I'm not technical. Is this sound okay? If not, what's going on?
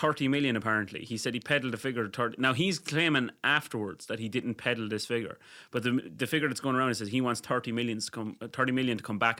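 No. There are two sharp clicks in the speech, at 1.69 and 5.77 seconds. Each is likely from dropped samples, a tiny sliver of sound missing.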